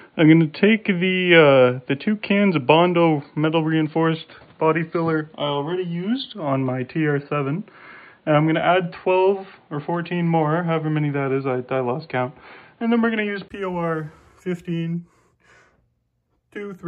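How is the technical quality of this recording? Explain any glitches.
The quality is limited for most of the recording. From the start until 13.50 s, the sound is dull and boxy, with nothing above 4.6 kHz. A faint background noise sits well below the signal. At 13.50 s, a 20 ms silence breaks the sound. Then the level shifts noticeably and the full, brighter band returns. The likely cause is an input switched to a poorer device, such as a headset's call profile, before switching back.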